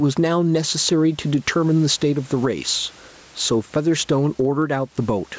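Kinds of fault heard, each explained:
Gain pumping, throughout: the gain swings by around 10 dB, which points to input gain set far too high with a fast limiter likely clamping each peak and squashing the dynamics.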